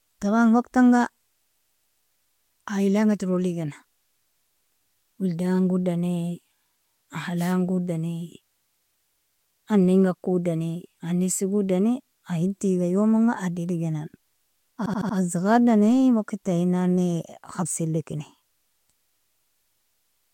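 From 1.45 to 2.01 s, repeated frames make the speech stutter. A 139 ms block replays four extra times, adding 557 ms. At 7.37 to 7.54 s, a wireless microphone noise hit brings a short burst of static as the radio signal fades. From 14.85 to 15.16 s, a 68 ms block repeats four more times, adding 314 ms.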